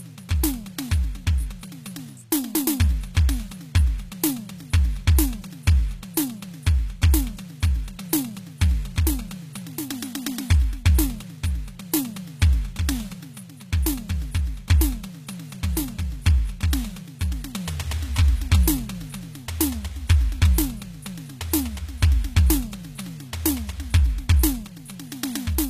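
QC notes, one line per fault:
Throughout, HE-AAC compression: the music has most likely passed through an HE-AAC encoder at a very low rate, roughly what a 20 kbps stream would produce. Only the lower spectrum is coded properly, and the treble is rebuilt by copying lower bands upward under a coarse envelope, with nothing above 14.9 kHz. The top end reaches higher than plain AAC would at this rate but its harmonics no longer line up with the body of the sound, so the treble comes across gritty and metallic, and the damage is plainly audible.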